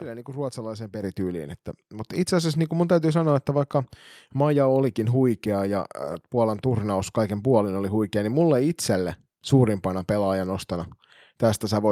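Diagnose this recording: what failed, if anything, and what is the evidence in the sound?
Microphone volume stepped up in call processing: automatic gain raised input about 7 dB at 1.02 s and about 4 dB at 2.04 s. Waveform and spectrogram background step up together.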